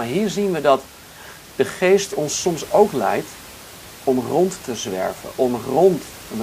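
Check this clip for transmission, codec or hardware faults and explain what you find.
Nothing stood out on listening to the speech, and the faint room noise sitting about 20 dB below it belongs to the recording itself.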